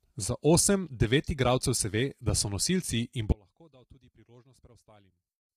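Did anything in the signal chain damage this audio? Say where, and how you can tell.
Yes. Throughout the speech there is heavy codec damage: rough, grainy voicing, noise filling between harmonics, and a synthetic-sounding top band. That points to low-delay AAC compression, likely AAC-ELD at around 24 kbps, where too few bits force coarse quantisation of each frame's spectral lines.

At the network or transport stage, an audio dropout to a faint residue begins abruptly at 3.32 s and lasts to the end. The speech collapses to a faint leak about 30 dB down, likely from a lost stream while the path stayed live. The sudden drop, not a fade or pause, separates it from a natural silence.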